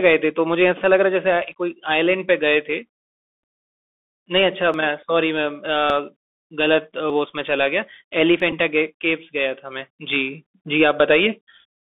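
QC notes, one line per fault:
Throughout: Bluetooth CVSD headset codec. The speech is confined to roughly 250 Hz to 3.5 kHz, with a granular hiss beneath it and scratchy s sounds, consistent with 64 kbps one-bit delta coding whose adaptive step cannot keep pace with fast, loud high-frequency detail.
4.74 s, 5.9 s, 7.1 s, 8.4 s: dropped buffer (overrun). Each time the speech jumps forward by about 20 ms with no gap of silence. The likely cause is samples being overwritten before the program collected them, so the remaining audio is spliced directly together.
8.51 to 8.52 s: Bluetooth headset packet repeated. A brief buzzy tick lasting 11.2 ms, which points to three consecutive lost voice packets. The chip re-decoded the previous packet's bits each time, so the same 3.75 ms fragment repeats until good packets resume.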